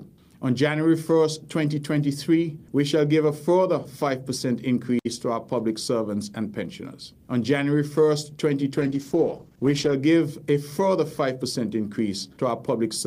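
At 8.79 s the call's bandwidth estimate falls and the encoder is pushed onto a far smaller bit budget, a call bitrate drop that fits a cut from 48 kbps to 12 kbps. Starved of bits, Opus codes coarsely and cuts the high frequencies, so for about 1.15 s the sound turns muffled and rough, with a watery smear. Brightness and detail return at 10.01 s as the bitrate recovers.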